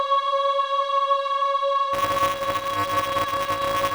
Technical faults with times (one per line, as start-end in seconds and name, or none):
1.93-3.94 buffer tearing